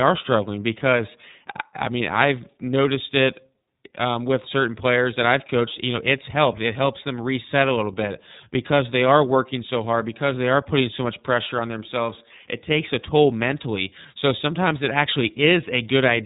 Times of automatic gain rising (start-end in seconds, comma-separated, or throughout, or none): none